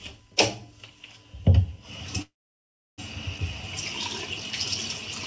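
From 2.22 to 3.00 s a call audio freeze stalls the sound, likely from packets held up emptying the jitter buffer. About 0.68 s is silence, but nothing is lost afterward, unlike a skip. At 3.38 to 3.40 s playback does a skip ahead: roughly 400 ms of sound is dropped and the two sides are joined almost directly, with no pause. Throughout, the G.722 call path leaves nothing above 8 kHz.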